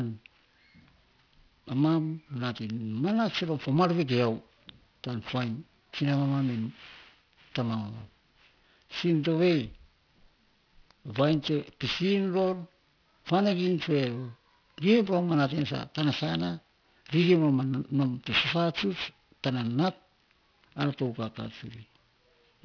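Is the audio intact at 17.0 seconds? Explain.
No. At 17.0 seconds the speech shows aliasing, present throughout. Content above 5.5 kHz folds back as gritty, metallic tones about 15 dB below the speech, consistent with unfiltered downsampling to about 11 kHz.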